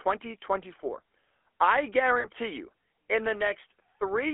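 This is a speech clip carried through the GSM full-rate codec. The voice has a buzzy, gravelly roughness that is plainly audible throughout. The codec rebuilds the voice from a vocal-tract model driven by sparse pulses, and that coarse excitation causes the grit. The band sits at about 300 Hz to 3.4 kHz, and the sound fits the 13 kbps full-rate coder. At 2.2 s there are lost GSM frames. For about 40 ms, to 2.27 s, the sound is held as a rough, metallic ring. The decoder repeats the last good frame to cover the gap, which fits two missing frames.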